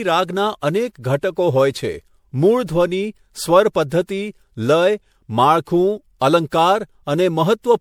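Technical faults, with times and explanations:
Throughout, generation loss. The speech sounds swirly, smeared and hollow, and attacks blur. Likely cause: repeated MP3 encoding, several passes at around 96 kbit/s.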